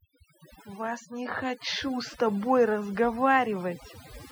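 A speech clip with overdone noise removal throughout: the noise reduction was set too aggressively, pulling individual frequency bands down or off whenever they sat near its noise estimate. Gaps collapse into near silence with twinkling specks, and quiet parts of the voice are removed along with the noise.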